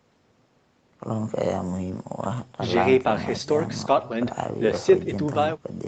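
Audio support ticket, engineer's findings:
No faults found in the speech signal; content stops at 8 kHz with the lowest bass removed, consistent with the call's microphone processing and an Opus-coded call path.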